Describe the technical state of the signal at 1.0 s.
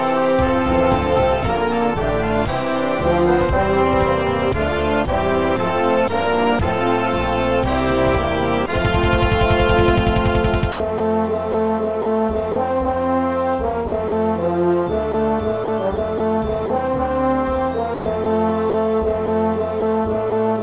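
At 1.0 s the signal is intact, with only the expected narrowband character of the WebRTC call path, whose G.711 mu-law coding leaves nothing above 4 kHz.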